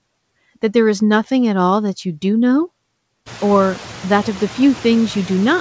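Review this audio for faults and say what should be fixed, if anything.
Noise suppressor artifacts are present for the whole clip. The suppressor treats steady background as noise and pulls those bands down by about 16 dB frame by frame, so the room noise sinks in the gaps and comes back up under the speech. That's most obvious after the room noise jumps around three and a half seconds. A gentler suppression depth, or smoother attack and release on the suppressor, would keep the background from dipping and rising like that.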